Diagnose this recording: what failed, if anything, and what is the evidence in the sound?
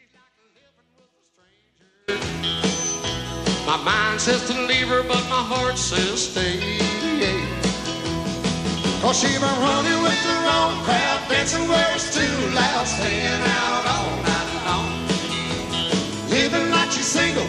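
An audio dropout to a faint residue is already under way when the clip opens and ends abruptly at 2.08 s. Until then only a faint sound remains, roughly 40 dB down. That points to a likely break in the analogue feed while the downstream path stayed live. A digital dropout would fall to true silence, and a fade would ramp in gradually.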